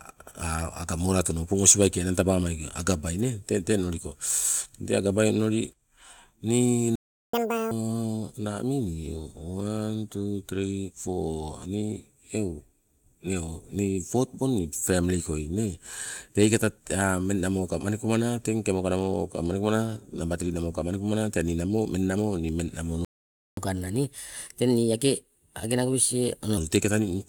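At 6.96 s the speech cuts out in mid-flow and the output stays silent until 7.33 s, a gap of about 0.38 s. This is a playback stall. The likely cause is the player running out of buffered data, or its audio thread being blocked, so that nothing reached the output. Speech resumes where it stopped, so no material is lost, only delayed.

Immediately after, from 7.33 to 7.71 s, there is catch-up at higher speed. The player runs its backlog at 2.0 times normal rate by resampling, so the speech is both fast and pitched up by roughly ten semitones, giving a brief chipmunk-like burst before it drops back to normal speed.

A second playback stall runs from 23.05 to 23.57 s, about 0.53 s of silence in the middle of the speech. Here too the likely cause is the player being starved of data or blocked, and the speech again picks up from where it left off.

A longer and gentler catch-up at higher speed follows, from 23.57 to 26.57 s. 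Playback runs at 1.15 times normal, raising pitch by around two semitones. The effect is a slightly hurried, slightly higher-sounding delivery for three seconds before speed and pitch settle back.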